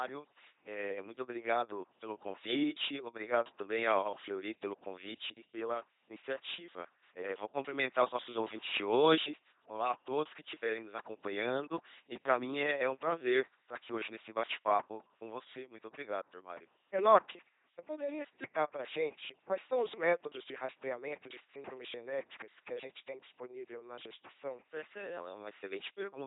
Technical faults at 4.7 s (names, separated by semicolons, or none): LPC-10 vocoder; clock slip clicks